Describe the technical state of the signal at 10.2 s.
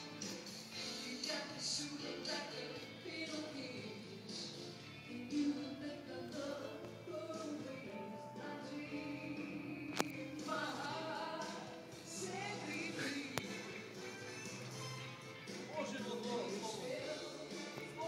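At 10.2 s the signal is intact, with no audible fault at that moment.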